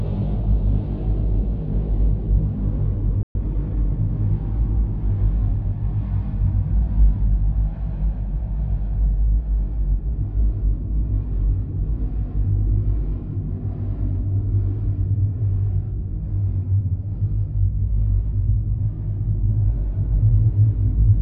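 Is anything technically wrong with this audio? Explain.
Yes. There are two linked faults, one right after the other.

Playback stall, 3.23 to 3.35 s. The sound cuts out in mid-flow for about 120 ms. That is long enough to hear as a clear hole, not a click. The likely cause is that the player ran short of data or its output thread was held up, so nothing reached the output until it recovered.

Time-compressed catch-up, 3.35 to 4.15 s. Straight after the gap, the sound runs about 1.15 times faster for some 0.8 s. The player is working off the backlog the stall left behind. It removes short slices of audio and cross-fades across each join. Pitch stays where it was, but the sound feels hurried. After 4.15 s the pace returns to normal.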